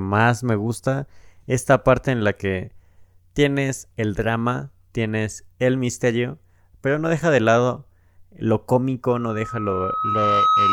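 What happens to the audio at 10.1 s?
The microphone is picking up its own loudspeaker, so a loudspeaker feedback squeal at 1.3 kHz swells from 9.11 s to the end, finishing about 5 dB above the speech.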